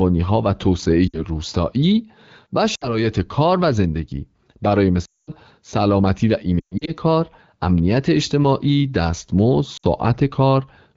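A speech clip on an AMR wideband link with lost AMR speech frames: the decoder bridged gaps at 1.08–1.25, 2.75–3.05, 5.05–5.31, 6.59–6.94 and 9.77–9.86 s, smearing then fading the speech, longest near 5.1 s.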